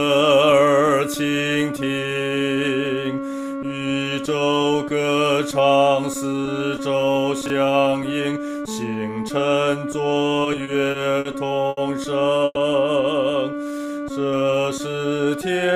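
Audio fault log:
7.46–7.50 s, chunks out of order: a 20 ms chunk plays one slot late, after the chunk that should follow it. Nothing is missing, which sets it apart from a dropout, but the brief jumble has three hard joins.
10.43–11.27 s, repeated stalls (stutter): the sound halts five times, with 130 ms filled in by continuing the last sound, the longest gap 50 ms, about 16% of the span. Nothing is lost. Unlike a single stall, the holds recur, so the passage drags and stutters.
11.69–11.79 s, short stall from a late packet: one sound is held for 80 ms with a slight buzz or dip while the buffer waits, then resumes exactly where it stopped. The delay grows by 80 ms. It is one isolated hold, not a run of stutters.
12.45–12.58 s, call audio freeze: the last sound continues as a fading buzz for 110 ms, including about 20 ms of near-silence, then picks up where it left off. This is likely caused by packets held up in transit. 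It is longer than a short stall and fades out instead of holding steady.
13.51–14.51 s, jitter buffer slow-down: repeated pitch periods and pause fragments add 127 ms, so the sound runs at 88% speed. Unlike a stall, there are no halts or buzzes. The pitch stays unchanged and everything is simply drawn out.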